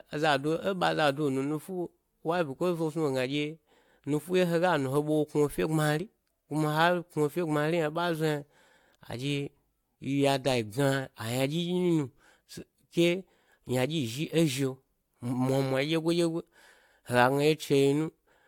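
Speech that was likely decoded and re-encoded around four times through a lossy codec, each pass requantising on a shifted frame grid, so the character fits repeated AAC-LC at about 96 kbit/s. This is generation loss, present throughout the clip. The stacked passes leave the speech sounding swirly, smeared and hollow, more degraded than one encode at that rate would be, with blurred consonant attacks and nothing above 19.3 kHz.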